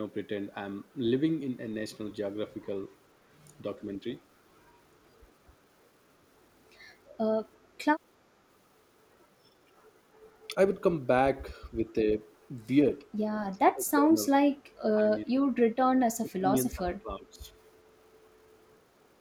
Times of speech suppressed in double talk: 13.53-14.21, 14.90-15.44, 16.19-17.48

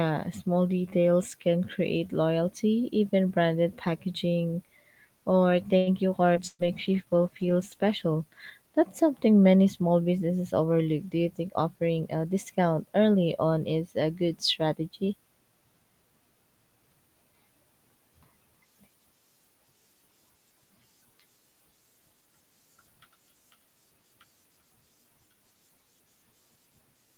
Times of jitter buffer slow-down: 6.63-7.24

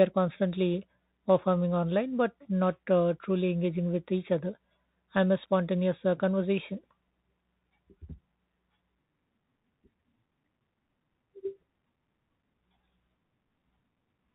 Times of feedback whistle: none

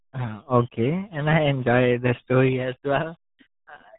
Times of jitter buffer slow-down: none

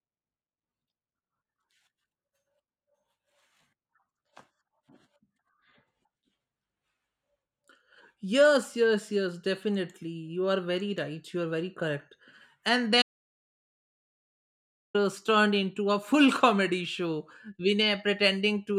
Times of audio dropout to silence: 13.02-14.94

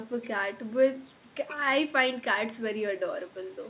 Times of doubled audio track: none

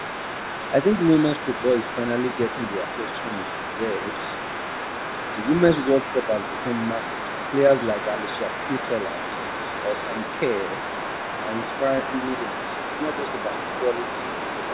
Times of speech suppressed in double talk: 12.02-12.12

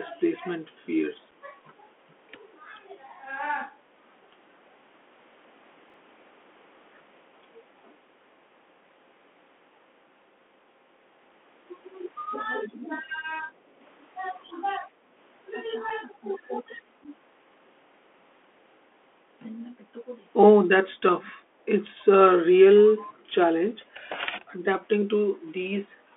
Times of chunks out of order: 5.90-5.94

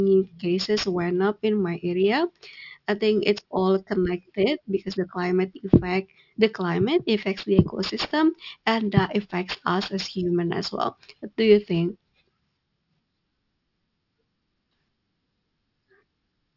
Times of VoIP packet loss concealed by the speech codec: none

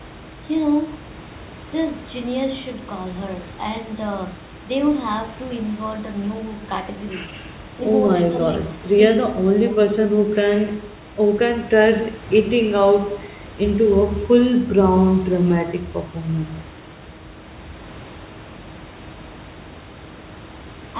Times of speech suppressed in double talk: 8.12-8.98, 9.29-10.08

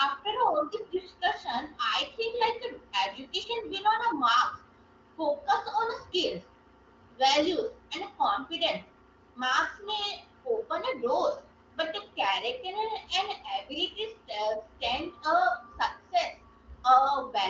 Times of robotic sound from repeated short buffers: none

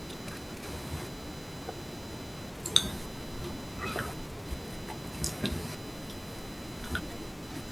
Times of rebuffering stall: none

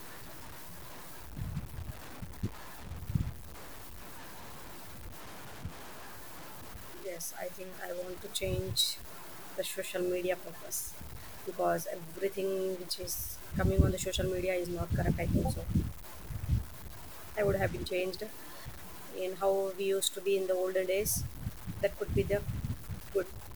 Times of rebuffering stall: none

